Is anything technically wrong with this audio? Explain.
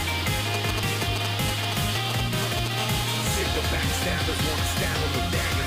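Yes, there are two kinds of interference. GSM signalling bursts, from 0.54 to 2.68 s: a nearby 2G phone's intermittent radio bursts are rectified in the audio circuit, producing galloping ticks and short 217 Hz buzzes nearly as loud as the sound. GSM phone buzz, from 2.78 to 3.76 s: the phone transmits in bursts 217 times a second during a call, and rectification gives a hard, raspy 217 Hz buzz, about 11 dB below the sound.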